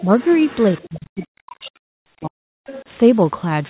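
From 0.0 to 0.88 s a second, fainter voice runs under the speech, about 20 dB below it. This is the other side's voice leaking through. The likely cause is a loudspeaker echo that the echo canceller did not fully remove from the microphone. It is a faint copy of another talker sitting behind the main voice. It returns briefly from 2.66 to 2.84 s at about the same level.

At 0.03 to 0.11 s the speech dips by roughly 10 dB. From 0.88 to 2.61 s it is pulled down much harder, by as much as about 40 dB, for around one and a half seconds in total. This is speech suppressed in double talk, likely from the echo canceller turning its own talker down because both sides spoke at once.

Within that stretch, at 1.07 to 1.16 s (90 ms) and 1.88 to 2.15 s (270 ms), the room background turns into a steady, featureless hiss, about 11 dB and about 17 dB quieter respectively. This is comfort noise in place of the background, likely synthesised by the receiver during a transmission pause. 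A noise gate would leave near-silence, but here a smooth noise with no detail fills the gap.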